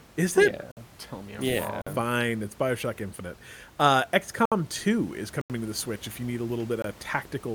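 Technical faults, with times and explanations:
0.72, 1.82, 4.45, 5.41 and 6.82 s, block of digital silence: the sound drops out abruptly for 52, 49, 64, 85 and 21 ms, and even the room noise, about 24 dB under the speech, vanishes. Runs of samples were zeroed, pointing to unfilled output buffers; the last two fit 4096- and 1024-sample blocks.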